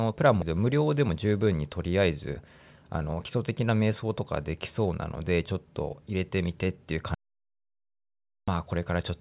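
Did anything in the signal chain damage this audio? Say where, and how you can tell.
Yes. Skip ahead at 0.42 s, a network and jitter-buffer fault. The audio jumps forward with no fill, joining two points that should be separated by roughly 0.7 s. A stretch of packets was discarded, or the buffer threw away queued audio when it overflowed, and playback resumed from later material. That left an abrupt splice in mid-flow rather than a gap. The overall delay shrank by about the same amount.

Jitter buffer speed-up from 0.51 to 1.54 s, immediately after that jump. The sound runs at about 109% of normal speed while the pitch stays put, so it comes across as rushed. The buffer was still holding more audio than its target, and the receiver repeatedly cut out short pitch-period-sized pieces to drain it. Across that second it removed something like a tenth of a second in total.

Audio dropout to silence from 7.14 to 8.48 s, about 1.33 s long. 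The sound stops mid-flow and falls to silence, with no room tone underneath, then cuts back in just as abruptly. Silence with no room tone means the capture side kept writing samples with no input behind them, likely from a lost device connection or a momentary mute. That whole stretch is simply gone, underneath the narrowband call path, which tops out at 4 kHz.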